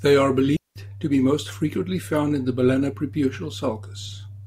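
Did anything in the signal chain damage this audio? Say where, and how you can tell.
Yes. At 0.57 to 0.76 s, just before "to be most frequently", the speech drops into a clean hole of near silence lasting about 0.19 s, with no noise burst either side: a digital wireless dropout. The radio link lost too much data, and the receiver muted with a very short fade.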